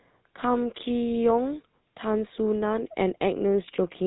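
Speech running through the GSM full-rate codec throughout: a buzzy, gravelly roughness from coarse pulse-driven excitation, which plain telephone band-limiting lacks, plus nothing above 4 kHz, fitting 13 kbps.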